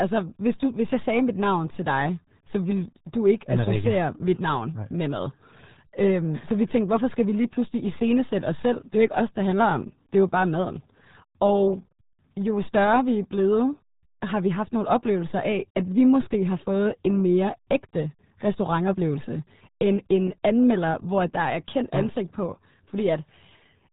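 Speech squeezed through the RealAudio 14.4 codec, whose heavy damage fits an 8 kbit/s dial-up stream, leaves everything muffled and gargly from start to finish, with nothing above 3.8 kHz.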